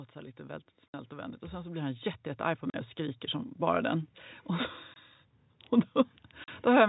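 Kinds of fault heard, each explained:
automatic gain rising: voice and background noise swell together by about 13 dB over nearly four seconds; a talker growing louder would leave the noise unchanged.
packet loss filled with silence: four hard-edged dropouts of 20 to 60 ms, in steps that fit 20 ms packets, left dead silent instead of concealed.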